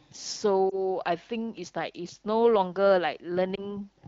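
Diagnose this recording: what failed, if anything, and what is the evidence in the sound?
Lost AMR speech frames on the radio link caused the two brief disturbances, at 0.70 to 0.78 s and 3.55 to 3.70 s. Each sounds like one missing 20 ms frame: a short dip or warble where the decoder repeats the last good pitch and vocal tract settings at reduced gain, followed by a weak or rough onset. On a spectrogram, the harmonics smear flat and dim briefly. The waveform shows a matching envelope sag.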